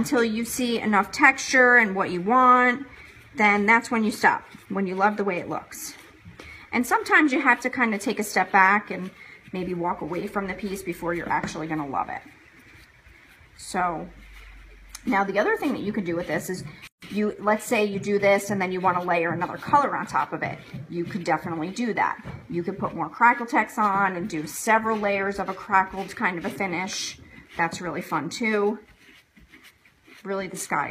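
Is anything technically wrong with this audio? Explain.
Yes. From 16.87 to 17.02 s the sound abruptly drops into a gap of about 149 ms, its smeared edges framing a hole, then resumes exactly where it stopped. This is a gap at a join of encoded pieces: separately encoded sections were butted together untrimmed, leaving encoder start delay and final-frame padding in place.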